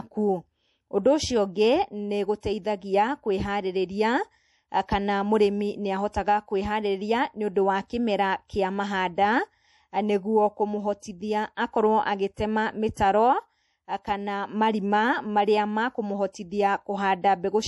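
Throughout, the speech has a watery, swirling texture, with metallic chirps on s sounds and nothing at all above 11.5 kHz, so the top end is dull and closed in. This is likely MP3 compression at a low bitrate, consistent with roughly 48 kbps. Starved of bits, the encoder cut the treble at a fixed point and dropped quieter frequency detail, which flickers in and out between frames and causes the swirl.

Pre-echo appears three times: from 2.40 to 2.43 s, spread over about 26 ms; from 12.94 to 12.97 s, over about 29 ms; and from 16.32 to 16.34 s, over about 20 ms. Each time a brief hiss arrives just before a sharp onset, and the attack itself sounds softened and smeared. The codec spread its quantisation noise across a whole block, so noise sized for the loud attack also filled the quiet moment before it.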